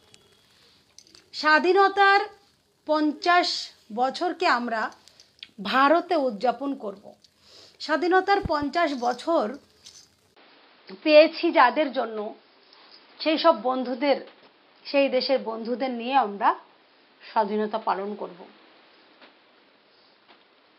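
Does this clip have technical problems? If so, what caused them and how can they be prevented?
Yes. From 10.35 s to the end the sound turns dull and boxy, with nothing above 5.3 kHz, a 20 ms gap at the change, a small level shift and a faint new noise floor. This is likely the input switched to a poorer device, a narrower-band microphone taking over mid-recording. Locking the recording input and disabling automatic device switching would prevent it.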